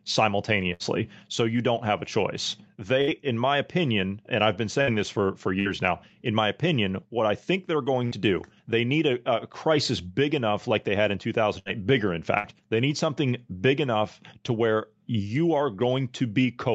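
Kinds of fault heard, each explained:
Burst of packet loss: several consecutive packets, about 60 ms of audio in all, failed to arrive in time, and the receiver covered each gap by stretching the last stretch of speech while fading it down. In this clip it happens seven times, between 0.73 s and 12.38 s, each patch lasting about 60 ms. A voiced moment becomes a brief held buzz and other moments a dying hiss, then speech resumes with a short piece skipped.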